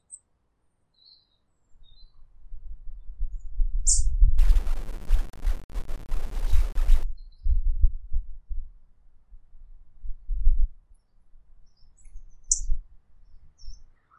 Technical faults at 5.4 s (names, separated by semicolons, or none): low bit depth without dither